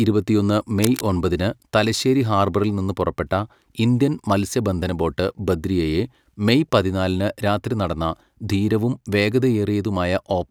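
From about 0.83 to 1.08 s there's a burst of cable scratch noise, a dense, ragged rustle sitting roughly 10 dB under the speech. It's likely a worn lead or connector being moved, its contact resistance jumping around and scratching across the signal briefly.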